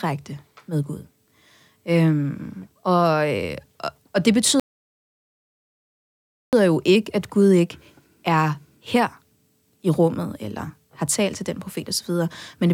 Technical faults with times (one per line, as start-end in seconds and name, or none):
4.60-6.53 playback stall